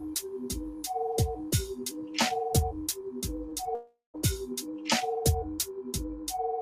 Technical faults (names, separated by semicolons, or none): noise suppressor applied to music or sounds; short concealed packet loss; long network dropout